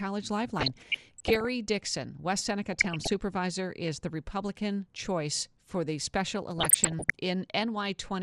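Speech, with a dull, granular, gurgling quality throughout. The upper range sounds thinned and unsteady. That is likely MP2 compression, with coarse quantisation and upper sub-bands dropping out, at a rate that fits around 80 kbps. DAB burbling appears three times: 0.49 to 1.48 s, 2.72 to 3.19 s just before "is the", and 6.58 to 7.15 s just after "choice for the special". Each burst puts short blips of noise into single sub-bands. Bit errors have slipped past error correction into the audio data. The damage grows heavier in the later bursts.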